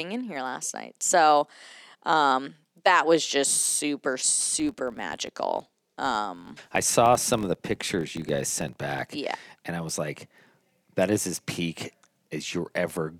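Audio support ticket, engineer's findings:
Ticking buzz at 43.1 Hz following speech level, 4.39 to 9.06 s, right after "that was just super". Filter restarted on every block. State cleared each block, consistent with 1024-sample blocks.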